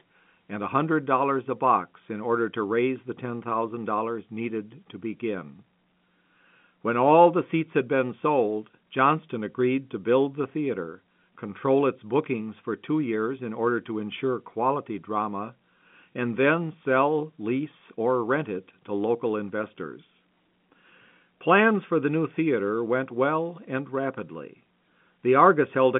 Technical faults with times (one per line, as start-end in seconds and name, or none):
none